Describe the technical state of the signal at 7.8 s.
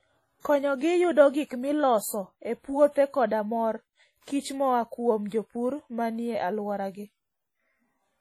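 At 7.8 s the speech carries a ringing, washy smear and a hiss that swells and fades with the signal, present across the whole clip. This is heavy damage, likely from WMA compression at a low bitrate around 32 kbps: long transform blocks spread quantisation noise over tens of milliseconds and zero weaker spectral lines. Unlike steady broadband noise, this hiss moves with the speech itself.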